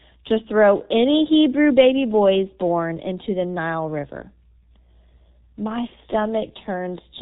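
From the start, the speech passes through the G.723.1 codec at 6.3 kbit/s. Nothing above 4 kHz survives. The coarse 30 ms frames and slow voice model leave the speech muffled and hoarse. Consonants blur together. The damage is heavy throughout.

At 5.87 s, VoIP packet loss is concealed by the speech codec. About 30 ms of audio went missing, which fits one lost frame. The decoder rebuilt it from the previous pitch and filter. The sound is stretched into a buzzy tone or coloured noise that fades, and the voice stays weak or distorted for tens of milliseconds after the packets return at about 5.93 s.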